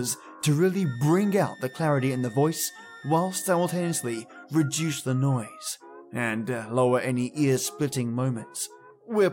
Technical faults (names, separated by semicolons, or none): switching supply whistle